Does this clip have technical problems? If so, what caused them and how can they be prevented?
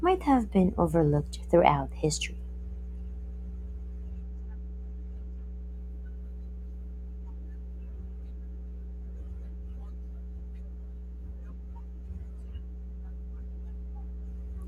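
Yes. Mains hum runs through the whole speech clip as a steady 60 Hz tone with low harmonics, sitting only around 10 dB below the speech. A ground loop or nearby transformer is coupling the power line into the signal. Prevent it with balanced cabling, a single ground point, and distance from transformers.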